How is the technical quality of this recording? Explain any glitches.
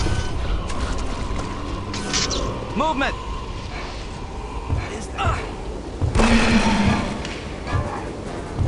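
No technical faults are audible.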